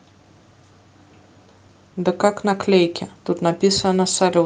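No technical faults are audible in the speech, and the call path behaves as expected for a voice codec, with the top end rolling off around 12 kHz and only the ordinary coding texture present.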